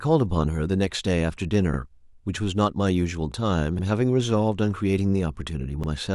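At 1.74, 3.79 and 5.84 s the speech stutters briefly. These are overlapping chunks. Each 2.0 s chunk starts about 48 ms before the previous one ends. That sliver plays twice at every join. It sounds like a regular click.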